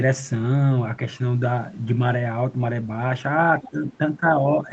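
From 3.62 to 3.69 s, a faint second voice sits about 20 dB under the speech. This is other side's voice leaking through, likely loudspeaker echo the canceller missed. It adds sound rather than removing it. From 3.70 to 3.88 s the talker's own speech drops by roughly 10 dB. That is speech suppressed in double talk, likely the canceller ducking both sides at once. A weaker leak, about 30 dB down, follows at 3.90 to 3.97 s. Shorter dips come at 4.17 to 4.26 s, about 10 dB deep, and 4.62 to 4.70 s, a shallower 5 dB.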